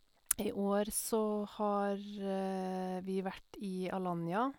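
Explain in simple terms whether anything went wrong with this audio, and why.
Nothing went wrong with this audio, so there is no problem to explain.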